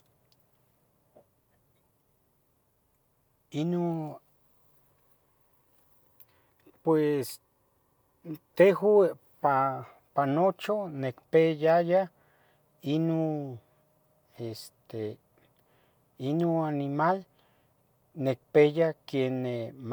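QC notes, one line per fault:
No fault found in this speech clip. Nothing here needs a QC entry.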